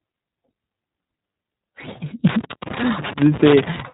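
From the start, the speech is narrowband and plainly coded by the iLBC codec. Nothing passes above about 3.8 kHz, so it sounds muffled. Each short frame is coded alone, leaving a rough, synthetic edge. The texture fits 20 ms frames near 15.2 kbps.

At 2.27 s, loose connector crackle begins and runs to 3.80 s. A worn or dirty contact keeps making and breaking. The signal is chopped in rapid, uneven bursts. It sounds like irregular scratching and crackle over the speech.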